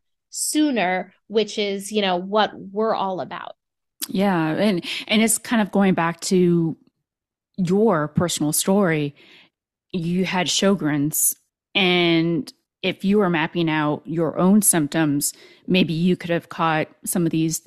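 Nothing in the recording stood out on listening.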